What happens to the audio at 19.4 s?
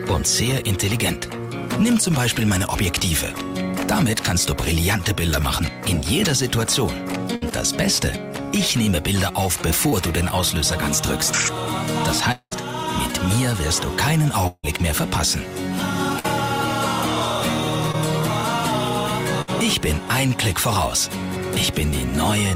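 At 19.42 to 19.49 s a burst of packet loss occurs: the receiver extends and fades the last sound for about 60 ms, then resumes with roughly 60 ms missing.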